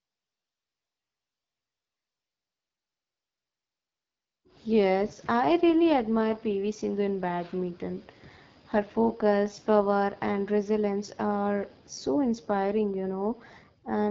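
Speech, rough and raspy for the whole clip, with nothing above 7.5 kHz and a hissy, noise-filled band from 6.4 to 7 kHz. That fits the AMR wideband (HD Voice) codec at one of its lowest rates, about 8.85 kbit/s, where the pulse-driven vocal model degrades plainly.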